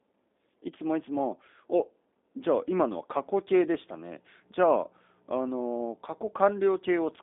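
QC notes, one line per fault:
throughout: G.729 codec. The speech was carried by a low-rate predictive voice codec, consistent with an 8 kbit/s G.729 link, that rebuilds each frame from a vocal-tract filter, pitch predictor and a few pulses, so it sounds rough and synthetic, band-limited to roughly 250 Hz–3.6 kHz.
3.14 s to end: mains hum. A ground loop or nearby transformer leaks the 60 Hz power line into the signal, adding a steady low buzz with low harmonics that sits fairly loud, roughly 10 dB below the speech, and persists to the end.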